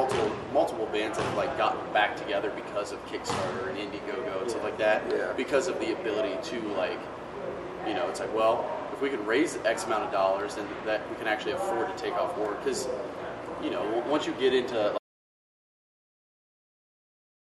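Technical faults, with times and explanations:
14.98 s to end, audio dropout to silence: the sound cuts off abruptly into silence with no room tone, likely because the input was lost while recording continued.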